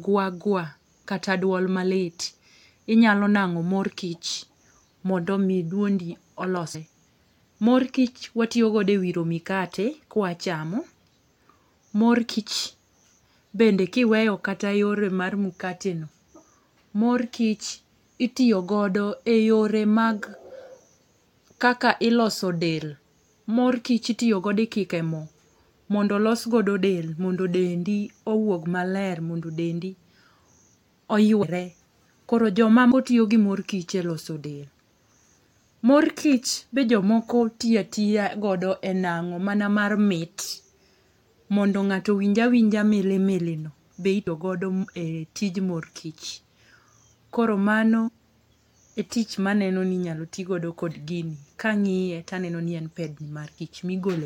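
Compressed frames skipped at 6.74, 12.38, 31.42, 32.90 (just before "tiyo gi mor kich"), 44.26, 48.07–48.09 and 53.57 s in this speech: whole frames never reach playback, so the sound jumps ahead by roughly 50 to 200 ms each time. The jump sizes fit a frame length of about 23.2 ms.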